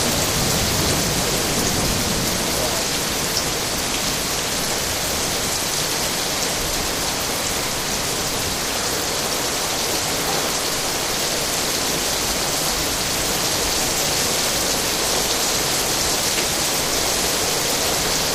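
No technical faults are audible.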